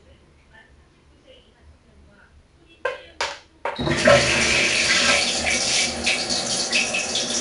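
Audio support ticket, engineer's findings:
4-bit ADPCM compression, full clip. Encoder stores each sample as a coarse 4-bit step from a prediction, so gritty hiss rides the level of every loud passage and smears sharp attacks. Nothing above 10.6 kHz, which fits a rate near 22 kHz at about 89 kbps.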